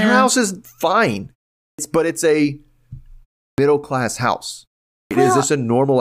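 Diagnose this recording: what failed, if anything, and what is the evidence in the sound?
Clipped start after a pause occurs three times: at 1.66 s, after "her house is fine" and into "but it's a"; at 3.47 s, into "class house"; and at 4.99 s, after "class house". Each time, speech resumes abruptly out of a 0.3 to 0.4 s silence, with its opening 110 to 126 ms missing. This is a playback-stage fault. The output device sleeps during the pause and needs that time to wake or relock, so the onset is swallowed.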